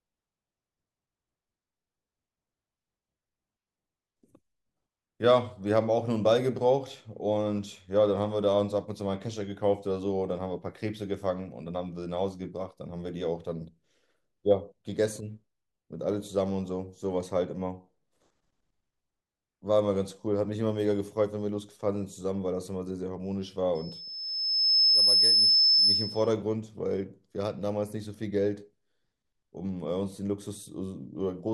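From 23.75 to 26.34 s a loudspeaker feedback squeal rises: the microphone re-amplifies its own loudspeaker until the loop runs away at 5.2 kHz. Within about a second the tone swells to roughly 10 dB above the speech, a bright horizontal spectrogram line and a ballooning waveform envelope.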